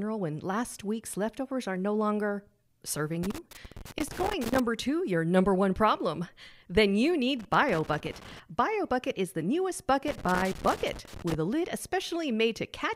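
At 3.23 to 4.60 s, 7.39 to 8.40 s and 10.08 to 11.34 s the speech is broken by loose connector crackle: a worn or dirty contact in the cable path makes and loses connection as it shifts, chopping the signal. Each burst lasts about one to one and a half seconds and sounds like irregular scratching. Its ragged, uneven timing sets it apart from the evenly spaced clicks of a digital buffer fault.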